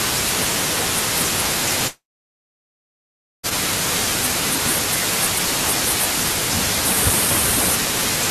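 From 1.87 to 3.46 s the speech cuts out in a long network dropout: likely no packets arrived, so the receiver stretched the last sound into a fading buzz, then about 1.4 s of silence. The spectrogram shows a smeared tail, then a blank band before the speech resumes mid-flow.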